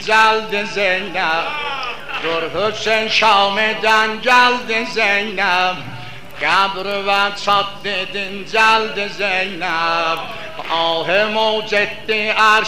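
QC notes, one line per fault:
Throughout, hard clipping: brief crackle on the loudest peaks, with no steady fuzz. The signal runs about 3 dB beyond what the stage can pass, so only a few samples in every thousand are squared off, and those flat tops spray high harmonics.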